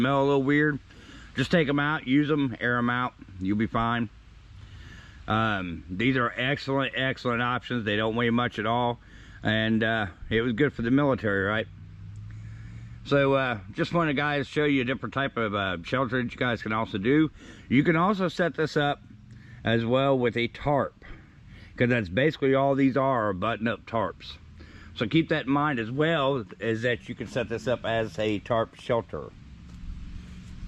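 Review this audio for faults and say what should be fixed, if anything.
No faults were found, so nothing needs fixing.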